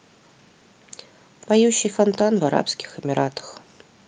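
Nothing goes wrong anywhere in this bit of speech; there's no technical fault to point to at any moment.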